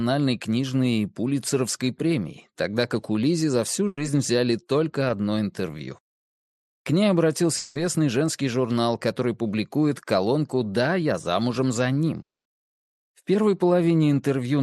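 From 3.87 to 3.99 s the sound freezes into a held, fading sound for about 100 ms, with a brief silence of about 20 ms before it resumes further on. This is a burst of packet loss: several consecutive packets never arrived, so the receiver stretched the last sound and faded it, and that stretch of audio is gone.

Between 5.07 and 5.11 s there is a quick smear, a wobble lasting about 20 ms, before the audio blends back in. That is short concealed packet loss: a packet or two missed the decoder, the gap was patched by extending the preceding sound, and a brief piece of the original was lost.

At 7.57 to 7.77 s the sound turns into a sustained buzz or hiss that decays over about 180 ms without ever going fully quiet, then jumps ahead. At 12.21 to 12.47 s a similar patch decays more quickly and leaves silence for most of its 240 ms. Both are likely a long network dropout, where nothing arrived for a stretch and the concealment ran out of material, so the audio picks up later with that portion missing.

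Throughout, the audio has the coding texture of the call path and is band-limited at about 12 kHz, which fits an Opus stream at around 32 kbps.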